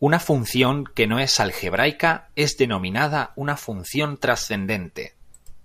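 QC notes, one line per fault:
No technical faults were found in the speech signal, and nothing in it calls for correction.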